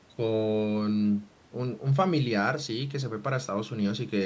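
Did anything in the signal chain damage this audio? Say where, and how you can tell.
No, nothing in the chain has damaged this speech: it shows the ordinary footprint of call microphone processing, with the lowest bass trimmed by its high-pass filter and no content above 8 kHz, and no stage has added any defect on top of that.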